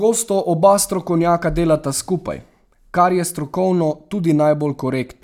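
No technical faults can be heard anywhere in the recording: the signal stays continuous and steady throughout, with no breaks, level jumps or added disturbances.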